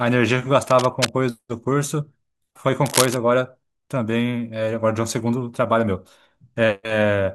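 Cable scratch noise appears from 0.63 to 1.12 s, well below the speech, and again from 2.86 to 3.17 s at roughly speech level. Both are dense, ragged bursts of scratching, likely from a worn cable or connector being moved and rapidly varying its contact resistance.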